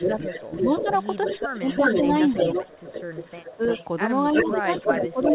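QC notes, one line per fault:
0.00–3.85 s and 4.31–5.35 s, echo leak: a second copy of the speech trails the original by about 0.34 s in the first stretch and 0.35 s in the second. It is roughly as loud as the direct sound, so the two smear into a doubled, confusing overlap inside the narrow band that stops at 4 kHz. The likely cause is a loudspeaker at one end whose echo canceller let its own pickup through and sent it back down the line.
0.07–0.86 s, 1.40–1.64 s, 3.53–3.62 s and 4.43–5.35 s, speech suppressed in double talk: the level of the speech dips at each of these spots, by around 15 dB in the first and last and around 10 dB in the middle two. Each time the echo copy overlaps it. This is likely the echo canceller failing to tell the live talker from the returning echo and turning both down together.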